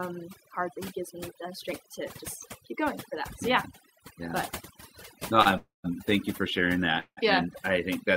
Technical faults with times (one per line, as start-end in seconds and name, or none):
0.00-8.16 overdone noise removal
5.42-5.47 short stall from a late packet
5.57-5.86 call audio freeze
7.00-7.19 call audio freeze